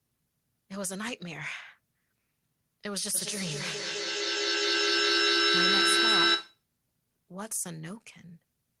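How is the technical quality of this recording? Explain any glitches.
The recording has one clear glitch. Feedback echo between two devices, 3.14 to 6.66 s: a nearby device replays the speech into the microphone, so each word returns roughly every fifth of a second, thin and ringing, building to about 10 dB above the speech.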